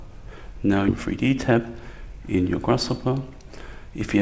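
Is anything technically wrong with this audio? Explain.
Yes. There are two timing faults: a forward skip and a sustained speed-up.

Skip ahead, at 0.88 to 0.90 s: about 0.7 s of audio is missing. The receiver threw away a block of audio while later audio was already queued, so playback jumps straight to it. Nothing fills the gap, so the material on either side is spliced almost directly. A chunk of the sound simply vanishes.

Jitter buffer speed-up, from 1.00 s to 4.17 s: after the skip, the buffer still held more audio than its target. The receiver repeatedly cut short pitch-period-length pieces to drain it, roughly 0.3 s in total. Playback therefore runs at about 109% of normal speed with unchanged pitch, so the sound feels hurried and compressed in time rather than higher. The codec path's band limit is audible as an absence of content above 8 kHz, which fits a wideband codec such as G.722.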